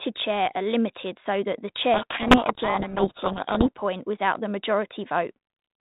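Between 1.94 and 3.76 s, just after "limited so that the", a codec payload misread occurs: the decoder takes the G.726 code words with their bit order reversed, so each sample's coded difference from the prediction is read as the wrong value. The result is speech buried in harsh, grinding distortion that ends before "without the". The 32 kbit/s G.726 coding itself, with its 4 kHz bandwidth limit, adds only light damage.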